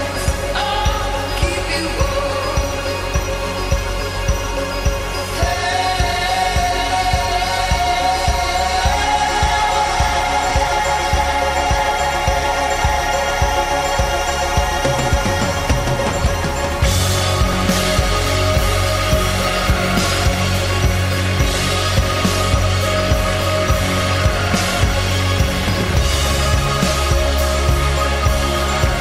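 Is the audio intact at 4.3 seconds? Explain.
Yes, at 4.3 seconds the audio is intact, with no dropout, glitch or other fault to be heard at that point.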